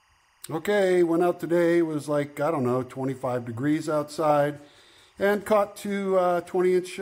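From start to finish, timecode bleed sits under the sound: linear timecode from an adjacent track or cable leaking in, its square wave flipping between tones near 1 and 2 kHz. The result is a faint, constant chirping warble roughly 40 dB down, at a rate that fits 23.976 fps code.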